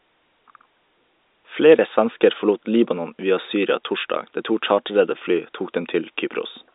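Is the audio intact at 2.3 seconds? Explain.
Yes, the audio is intact at 2.3 s, with the speech carrying through without any dropout, glitch or distortion at that point.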